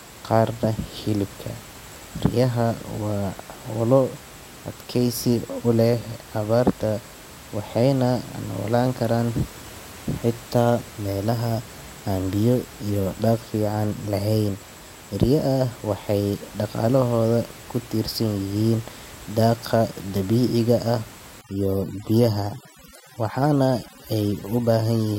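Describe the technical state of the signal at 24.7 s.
Overdone noise removal, 21.41 to 25.19 s, shuts off bands near its noise estimate, so the background becomes twinkling near-silence and quiet parts of the speech are lost with them.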